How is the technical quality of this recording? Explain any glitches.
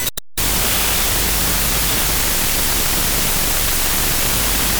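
Poor quality throughout. The whole speech recording suffers a wrong sample width fault. It points to 32-bit float data read as 16-bit integers. Mismatched bytes produce loud noise, with the voice buried and playing at half speed, an octave low.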